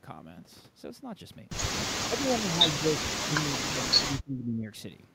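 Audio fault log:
2.08–4.7 s, speech suppressed in double talk: the echo canceller likely treated talk over far-end playback as echo, so the speech drops by up to about 25 dB for roughly two seconds.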